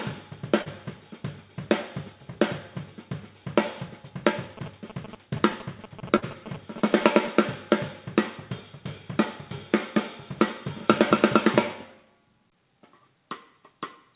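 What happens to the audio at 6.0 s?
At 6.0 s the audio is overlaid by a galloping dit-dit-dit of short buzzes, running from about 4.57 s to 7.27 s and sitting only roughly 10 dB below the sound itself. These are GSM signalling bursts: a nearby 2G phone exchanging short bursts of radio traffic with the network, which the audio circuitry rectifies into audible pulses repeating at about 217 Hz. The buzz stays within the call path's 4 kHz band.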